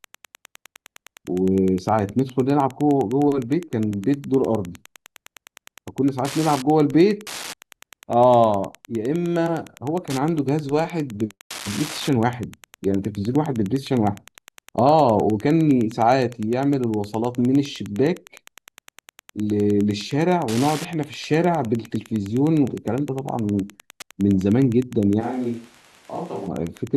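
A steady ticking, about ten times a second, runs under the whole of this speech recording, sitting around 25 dB below the voice. That is Wi-Fi interference: a nearby Wi-Fi radio's beacon, repeating every 102.4 ms, is being picked up and rectified by the audio circuit, so each transmission lands as a small click at a regular rate. From 25.22 s to 26.47 s the voice abruptly turns roomy and hollow, loses bass and drops by roughly 10 dB, while background room noise rises to around 25 dB below the speech. It then snaps back just as suddenly. The likely cause is a switch to a distant microphone: for that stretch the close microphone's signal was missing, and the recording falls back on one further from the talker.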